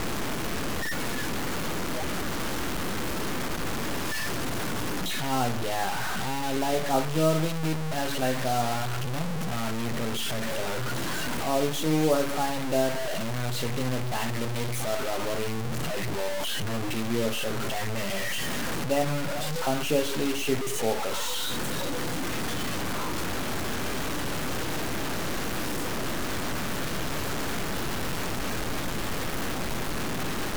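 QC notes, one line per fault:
Throughout, low bit depth without dither: speech sounds harsh and grainy, quiet tails sputter or vanish, with distortion nearly as loud as the signal; likely 4-bit truncation.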